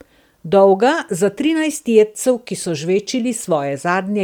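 Speech, with plainly audible codec damage throughout. The upper spectrum sounds thinned and replaced by noise, giving a breathy, grainy edge. This is likely Bluetooth LC3 compression. The damage fits a bitrate near 48 kbps with 10 ms frames.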